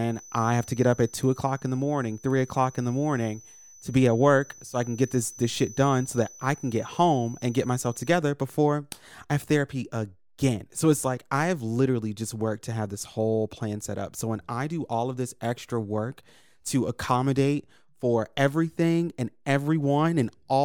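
From 0.0 to 8.25 s a thin whistle at a single pitch of 6 kHz sits behind the speech, roughly 25 dB below it, slowly swelling and fading. This feedback whistle likely comes from a loudspeaker-to-microphone loop held just short of breaking into a howl.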